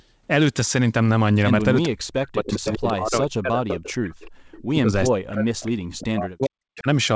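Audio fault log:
1.85–4.23 s, 4.73–4.92 s and 5.1–6.87 s: speech suppressed in double talk. The speech sinks by up to about 40 dB in the two long stretches and about 10 dB in the short one, likely because an echo canceller turned this side down while both sides spoke. The waveform shows hollowed, uneven envelopes, and the spectrogram shows bands fading out in patches.
2.51–2.93 s, 4.23–4.30 s and 4.51–4.63 s: echo leak. A delayed copy of the speech returns 404 ms late, about 10 dB below the speech in the first burst and about 25 dB below in the two short ones, likely residue a loudspeaker-side echo canceller failed to remove. The spectrogram shows faint patterns repeated about 0.4 s later.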